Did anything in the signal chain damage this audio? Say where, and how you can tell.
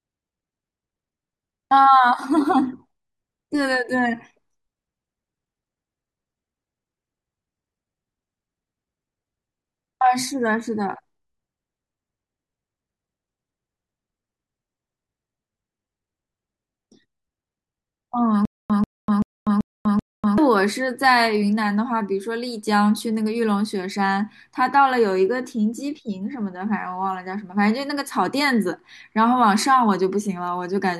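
Yes. From 18.45 to 20.38 s the speech stutters with silent gaps: a 140 ms fragment repeats five times, each followed by 245 ms of dead silence, every 385 ms. This likely points to a stalled playback or stream buffer replaying its last fragment, with the missing speech lost.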